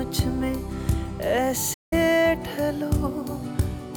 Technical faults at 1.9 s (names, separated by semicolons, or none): playback stall